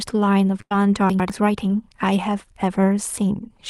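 A burst of packet loss at 0.61 to 0.75 s opens the trouble in this speech recording. About 90 ms of audio never arrived in time, so the receiver stretched the last sound it had across roughly 92 ms, fading it down as the gap grew, which gives a held buzz or dying hiss. Playback then picks up further along, and the stretch in between is simply gone, with about 5 ms trimmed at the rejoin. Chunks out of order follow at 1.10 to 1.30 s. Here a 100 ms block of audio was delivered one chunk late and plays after the block that should come after it. Nothing is dropped, but the sequence is swapped, leaving three abrupt seams and a brief moment where the speech sounds scrambled. A short concealed packet loss at 1.68 to 1.70 s is the smallest fault. About 10 ms failed to reach the decoder, and roughly 11 ms of synthetic fill, continued from the preceding pitch or as shaped noise, bridges the hole before blending back into the real signal. 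It is heard as a quick smear or wobble, and it may swallow a short consonant.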